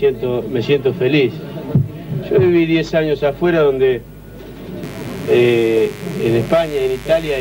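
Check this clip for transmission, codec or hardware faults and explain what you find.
One fault turns up: a mains buzz that begins at 4.83 s and runs to the end of the clip at 7.41 s. It is a steady, raspy buzz sitting roughly 20 dB below the wanted sound, with a gritty edge rather than a smooth hum. It comes from sharp switching spikes, from a dimmer, a rectifier or a missing shield, leaking in twice per 50 Hz cycle. That spreads energy across harmonics of 50 Hz reaching several kHz.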